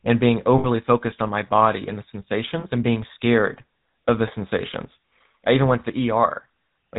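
From start to finish the speech has a buzzy, gravelly roughness, and nothing above 4 kHz is present, so it sounds dull and boxed-in. This is the GSM full-rate codec, and its damage is plainly audible. The codec models the vocal tract as a filter and excites it with a coarse, regularly spaced pulse train that keeps only a third of the excitation samples. That thinned excitation is what produces the grit, and the sound fits the 13 kbps full-rate coder.

At 0.58 s, right after "and being", the sound freezes into a short metallic ring that lasts until about 0.67 s, and the speech resumes with "focused on my body". At 2.6 s, after "my body and the", a briefer ring of the same kind holds until about 2.65 s, before "and being scared of". These are lost GSM frames. The decoder repeats the last good frame's settings, and the gaps of about 60 ms and 40 ms point to roughly three and two 20 ms frames.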